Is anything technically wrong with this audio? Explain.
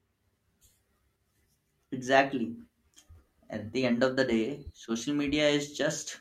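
No, there's nothing technically wrong to point to here; this bit of speech comes across without any faults.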